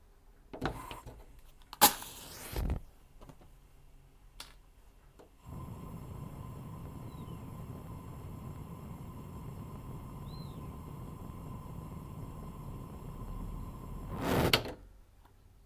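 Sounds, with no technical fault audible anywhere in the recording.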